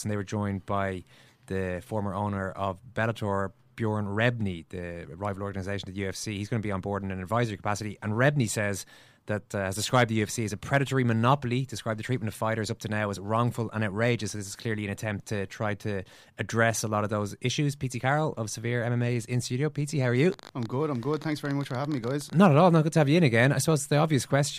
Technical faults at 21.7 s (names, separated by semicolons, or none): train of clicks